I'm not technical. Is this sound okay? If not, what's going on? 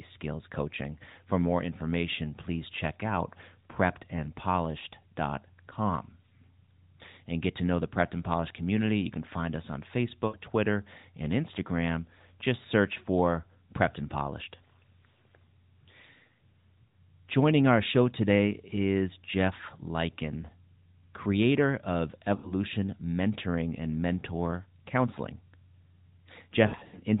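No. This speech has lost AMR speech frames. Parts of the mobile signal arrived damaged, so the phone filled the gaps by repeating the last good sound and fading it. Listen for a brief dip at 3.72 s, smeared wobbles at 10.3 to 10.4 s and 22.4 to 22.5 s, and a broken patch from 26.7 to 27.0 s.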